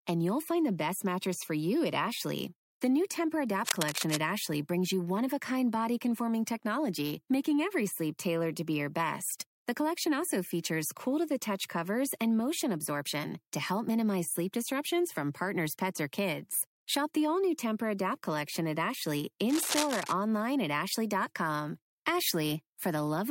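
At 3.63 to 4.17 s and again at 19.49 to 20.12 s, a dense, uneven rasp of scratching and rustling sits over the speech, only a little quieter than it. This is cable scratch noise, likely from a worn lead, connector or control being moved so its contact resistance jumps about. Unlike a single click or a dropout, each burst is a crackly smear lasting roughly half a second, and the speech continues underneath it.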